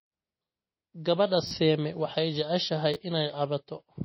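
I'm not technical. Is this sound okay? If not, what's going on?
No. Two separate problems can be heard.

Throughout the recording, the sound is dull and plainly watery, with nothing above about 5.8 kHz, so the crisp top end of the voice is gone. This is likely MP3 compression squeezed too hard: to save space, the encoder cut off the treble and dropped quieter details, which flicker in and out. Unlike plain muffling, that flicker gives the sound a swirly, underwater quality, and it lasts the whole recording.

There are also two short glitches from a repeated buffer. At 1.47 to 1.51 s, the playback device ran out of fresh audio and replayed the same tiny slice (about a hundredth of a second, which fits a 512-sample buffer) three extra times. At 2.94 to 2.96 s, right after "waxay jeceshahay", it replayed a slice twice more. The replays cover some real audio, roughly 40 ms at the first glitch and about 20 ms at the second. 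Unlike a dropout, the gap is filled with repeated sound rather than silence.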